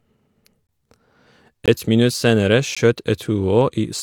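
Tiny holes in the speech at 0.67 s, 1.66 to 1.68 s (about 21 ms, fitting a 1024-sample buffer) and 2.75 s: blocks of digital silence, where likely unfilled output buffers cut to silence abruptly.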